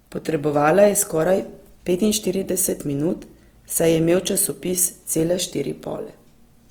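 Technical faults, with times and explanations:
Throughout: Opus compression. The speech sounds plainly grainy and rough, with voiced harmonics turning noisy, though there is little swirling. The likely cause is the Opus codec in its music mode at a rate that fits about 24 kbps. Each band's energy is kept, but short of bits, detail is rebuilt by folding lower bands or filling with noise. A spectrogram shows content up to 20.5 kHz, with few holes but smeared, speckled harmonics in the upper bands.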